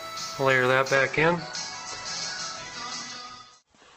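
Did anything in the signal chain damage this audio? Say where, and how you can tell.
Yes. At the network and codec stage, this is an adaptive stream at a lower bitrate. From 0.96 s to the end, quality drops abruptly with no gap: nothing remains above 8.2 kHz and codec artefacts thicken. That fits the player switching from 64 kbit/s Opus to a 12 kbit/s rendition after the connection slowed.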